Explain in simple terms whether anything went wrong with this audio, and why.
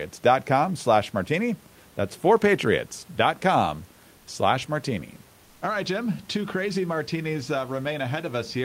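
Around 4.17 to 4.27 s, a tenth of a second of the speech clip's background is replaced by comfort noise in place of the background. The real room noise, which sits well beneath the speech, gives way to a smooth, featureless hiss that is slightly quieter, then the real background returns. The likely cause is discontinuous transmission: the sending side briefly stops sending audio during a pause, and the receiving side fills the gap with synthetic noise.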